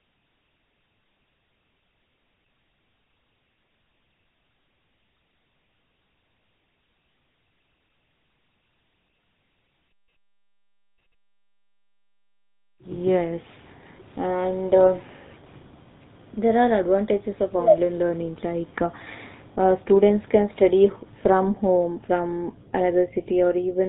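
Throughout, the speech sounds buzzy and gravelly, with nothing above 4 kHz: GSM full-rate codec damage, which fits a 13 kbps bitrate, rebuilding the voice from sparse, regularly spaced excitation pulses.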